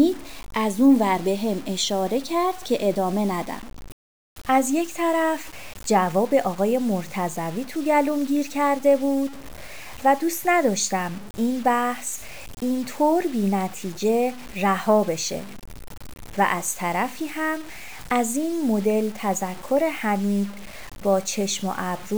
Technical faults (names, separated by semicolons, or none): low bit depth without dither